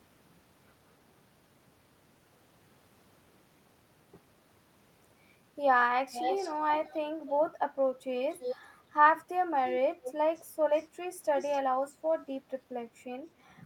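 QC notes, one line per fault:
6.12–6.53, 6.75–6.99, 8.30–8.58, 9.64–9.70, 10.04–10.14, 10.35–10.42, 10.76–10.87 and 11.39–11.60 s, echo leak: speech returns 289 ms late, from nearly full level to faint, likely loudspeaker pickup the echo canceller missed.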